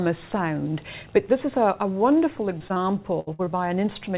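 Around 2.58, 2.68 and 2.74 s, and again at 3.45 s, about 20 ms of audio went missing each time. Each is a short concealed packet loss: the receiver extended the preceding sound to fill the hole and then blended back, giving a quick smear or wobble.

From 3.20 to 3.29 s and from 3.33 to 3.41 s, a burst of packet loss removed about 60 ms each time. The receiver held the last sound as a fading buzz or hiss for roughly 70 and 54 ms before resuming further on, with the material in between gone, all within the G.711 path's band, which has nothing above 4 kHz.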